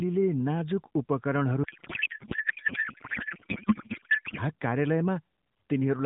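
From 1.64 s to 4.39 s the speech turns into garbled, warbling noise that barely tracks it. That's a codec payload misread: octet-aligned AMR frames decoded as bandwidth-efficient, so every field lands in the wrong place. Around it, the narrowband AMR sound fits roughly a 12.2 kbps mode.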